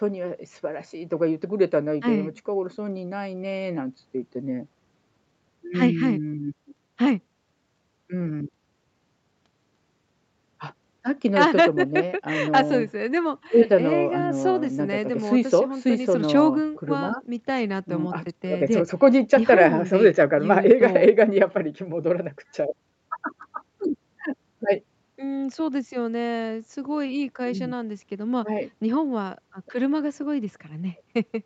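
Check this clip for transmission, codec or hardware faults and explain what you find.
Nothing faulty can be heard anywhere in this speech.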